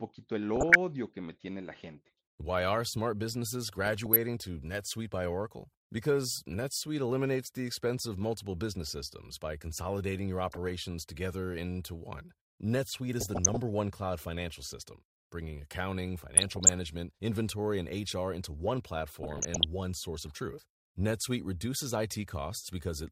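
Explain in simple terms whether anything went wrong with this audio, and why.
DAB burbling crops up six times: 0.56–0.76, 3.68–4.17 (after "are smart businesses"), 10.42–10.71, 13.19–13.57, 16.34–16.73 and 19.23–19.64 s. Weak reception let a few bit errors slip through, so slices of the sound get short blips of noise.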